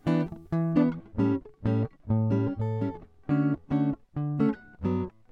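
From 0.73 s to the end at 5.32 s, the music has de-emphasis applied wrongly: a treble cut meant to reverse pre-emphasis lands on audio that had none, or is applied twice. The top slopes gently down, about 14 dB lower at 10 kHz than at 1 kHz, sounding dull rather than abruptly cut off like a low-pass filter.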